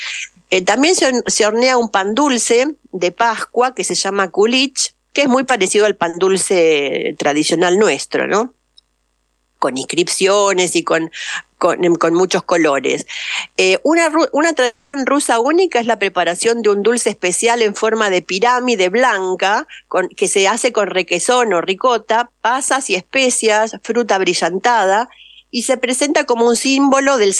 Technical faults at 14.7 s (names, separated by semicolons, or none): long network dropout